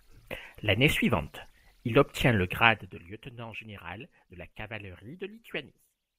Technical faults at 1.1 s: none

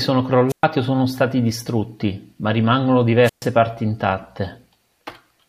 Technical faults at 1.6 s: none

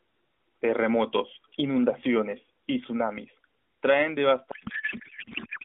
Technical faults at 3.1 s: none

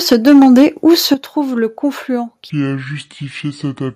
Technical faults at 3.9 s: section at the wrong speed

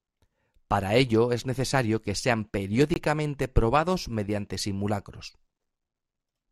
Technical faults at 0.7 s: none

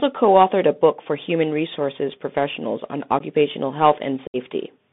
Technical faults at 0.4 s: Bluetooth CVSD headset codec

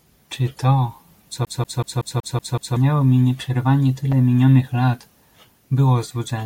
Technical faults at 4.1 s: loud pop

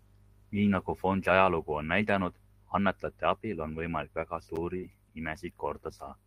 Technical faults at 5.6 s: none

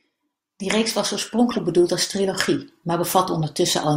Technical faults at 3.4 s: corrupt frame decoded

